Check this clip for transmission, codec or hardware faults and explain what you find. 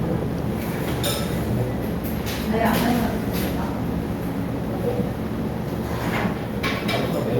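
No faults found: nothing audible in this sound points to a problem anywhere along the chain.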